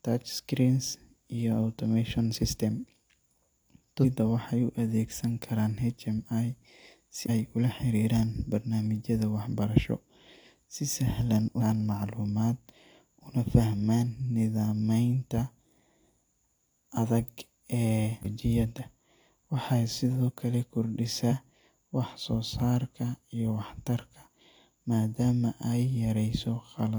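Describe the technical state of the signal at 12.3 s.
At 12.3 s the signal is intact, with no audible technical fault in the speech at that moment.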